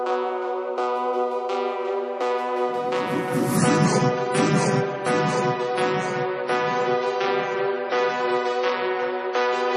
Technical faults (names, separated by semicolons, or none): adaptive stream at a lower bitrate